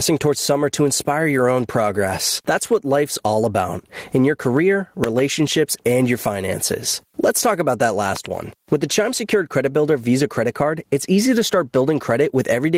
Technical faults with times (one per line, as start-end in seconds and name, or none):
0.00-12.78 gain pumping
5.04-5.21 loud pop
8.16-8.28 loud pop